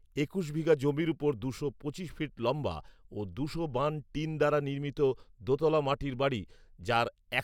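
Nothing in this bit of speech stands out as a technical fault at any point, so there's really nothing here to flag.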